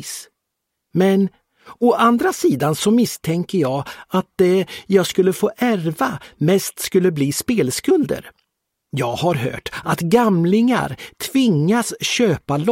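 A single sharp snap sits on top of the audio at 3.65 s, lasting only a few milliseconds and standing apart from the surrounding material rather than belonging to it. This is an electrical switching spike, most likely from a nearby switch, motor or static discharge arcing briefly and coupling into the audio line. The transient is very short and added over the signal, so the underlying sound continues unbroken beneath it.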